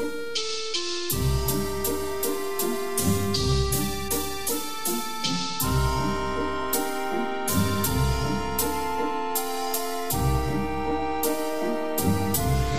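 Nothing technically wrong turns up anywhere in this one, so there's no fault to point to at any moment in the audio.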